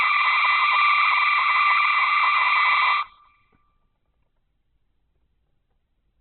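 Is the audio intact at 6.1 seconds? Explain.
No. At 6.1 s, as throughout, the music is grainy and rough from likely Opus compression at a very low bitrate; spectrograms show an empty band above 4.5 kHz.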